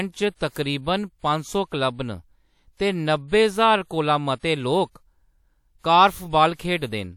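Pre-echo appears four times: at 0.35 to 0.41 s (55 ms), 4.39 to 4.43 s (41 ms), 5.79 to 5.84 s (56 ms) and 6.55 to 6.59 s (45 ms). Each time the codec's quantisation noise, sized for a sharp speech attack late in its block, leaks into the quiet stretch before it. This is heard as a brief hiss and a softened onset. On a spectrogram a faint broadband smear runs ahead of each attack, and the waveform shows low-level noise before the transient.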